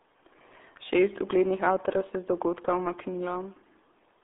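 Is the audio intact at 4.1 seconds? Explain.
No. At 4.1 seconds, as across the whole clip, the speech is muffled and gargly, with a thin telephone-like band from about 250 Hz to 3.6 kHz and nothing at all above about 3.7 kHz. This is the RealAudio 14.4 codec, built for dial-up modems. It keeps only a rough model of the speech and discards the upper spectrum, and the heavy coding damage at this moment fits a stream of around 8 kbit/s.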